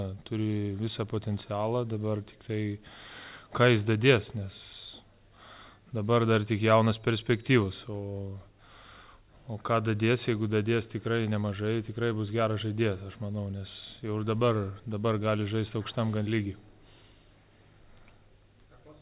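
No technical faults can be heard anywhere here.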